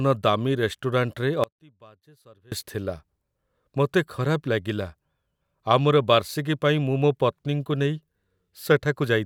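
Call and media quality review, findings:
Speech cuts out abruptly 1.44–2.52 s (about 1.08 s lost); gap holds only a faint leak of the signal, roughly 30 dB down. Audio dropout to a faint residue, likely a source-side interruption with the downstream path still live.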